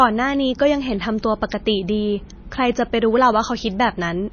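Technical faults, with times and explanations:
Throughout, MP3 compression: the encoder likely ran at a very low bitrate, consistent with something near 24 kbps, and ran out of bits. It cut the treble at a fixed point, leaving nothing above 6.5 kHz, and zeroed weak frequency lines that then flicker in and out between frames. The speech sounds dull and muffled, with a plainly audible watery, swirling texture, metallic chirps on s sounds, and smeared consonant attacks.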